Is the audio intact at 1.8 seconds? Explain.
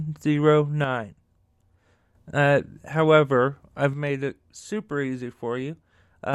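No. At 1.8 seconds the speech sits inside a stretch from 0.84 to 2.15 s where one channel drops out. The level falls abruptly by about 6 dB and recovers just as suddenly. The likely cause is one side of the stereo feed going silent while the other continues, so after the mono sum only half the shared signal remains. Unlike an ordinary gain dip, the step is exactly half-amplitude, and anything present only in the lost side vanishes entirely.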